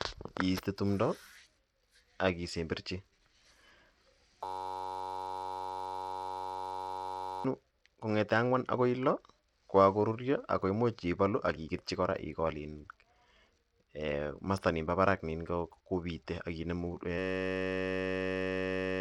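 Right from the start, the speech has a gritty, grainy edge and the top end flickers, with nothing above 19.9 kHz. That's most likely Bluetooth SBC compression running at a low bitrate, around 96 kbps, where the upper sub-bands get too few bits. At 4.45 s a system hang loop takes over until 7.45 s, just before "kong'ete ang'wan akoi": a 10.67 ms slice repeats as a steady 93.8 Hz buzz, which fits a 512-sample buffer, and about three seconds of audio are lost. The same buzz returns from 17.18 s to the end, losing about two seconds.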